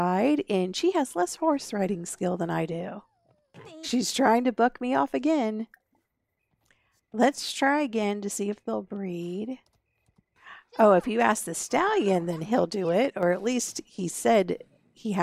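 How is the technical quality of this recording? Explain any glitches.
The recording has one glitch, a brief channel dropout near the end.

From 13.18 to 13.23 s, about 53 ms, one channel drops out. The level falls abruptly by about 6 dB and then snaps back. The likely cause is one stereo channel being lost briefly before the two were summed to mono, so shared content keeps only half its amplitude. On a waveform this shows as a short, sharp-edged notch at half height. On a spectrogram it appears as a thin vertical band of uniformly reduced energy across all frequencies.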